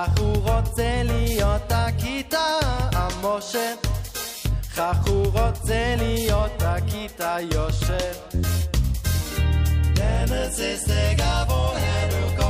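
No technical faults can be heard anywhere in the audio.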